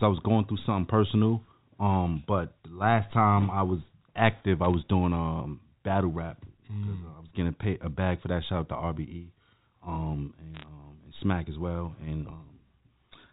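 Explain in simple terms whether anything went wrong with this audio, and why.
Yes, two short patches went wrong. Around 4.64 to 4.74 s and again around 10.55 to 10.66 s you get a quick burst of crackly ticks over the speech. That's bit errors on a digital phone line: a few stray bits got flipped in transmission, and each flip knocks a single sample off; a flip in a high bit produces a sharp click. The speech underneath is untouched. The phone-style coding itself just sounds like a normal narrow landline.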